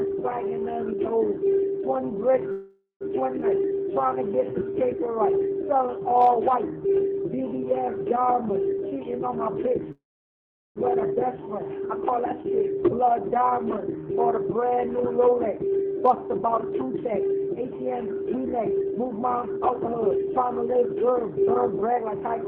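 From 2.51 to 3.03 s the sound stalls into a fading buzz, with about 120 ms of silence. This call audio freeze was likely caused by held-up packets draining the jitter buffer. The audio then resumes where it stopped, delayed by 492 ms but with nothing lost.

At 3.41 to 3.44 s comes a skip ahead. Playback jumps forward almost seamlessly, dropping roughly 150 ms of audio that was lost while later audio waited.

From 3.52 to 4.87 s a jitter buffer slow-down drags the sound to 91% speed at unchanged pitch. Repeated pitch periods add 127 ms to rebuild the buffer's reserve.

From 8.70 to 9.71 s a jitter buffer speed-up hurries the sound to 116% at the same pitch. Short pieces are trimmed out, roughly 150 ms in total, to cut the excess delay.

From 9.92 to 10.78 s a second call audio freeze fills 837 ms, mostly as silence lasting about 740 ms. The likely cause is again a starved buffer, and the audio continues intact afterward.

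From 14.44 to 22.45 s another speed-up runs the sound at 113%, removing around a second in total.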